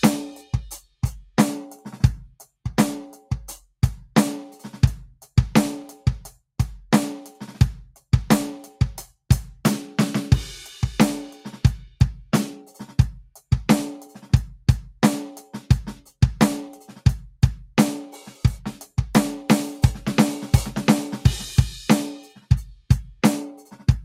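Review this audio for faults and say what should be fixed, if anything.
The noise suppressor misjudged part of the music as noise between 22.3 and 22.48 s and pulled it down harder than the surrounding material, by about 15 dB at its deepest. Over roughly a fifth of a second, sustained or decaying content thins out and drops away early. To prevent this, loosen the suppressor's threshold or shorten its release so tonal music isn't classified as noise.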